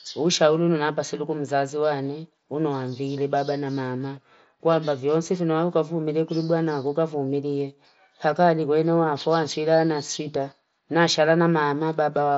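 No technical faults can be heard in this speech clip. It has the sound of a Bluetooth mSBC headset link, with the speech band topping out around 8 kHz and a light grain on the louder syllables.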